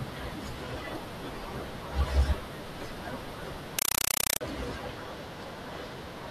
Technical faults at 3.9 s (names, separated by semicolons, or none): compressed stream played as audio